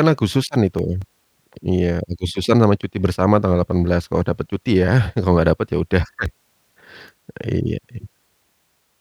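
CD scratch ticks appear from 0.33 to 1.48 s, six of them, and again from 6.03 to 6.95 s, five more. A scratch on the disc passes under the laser once per revolution and wipes out more data than error correction can rebuild, so the player patches or mutes the missing samples. Over the speech this sounds like a regular ticking at roughly five a second, each gap a few milliseconds at most.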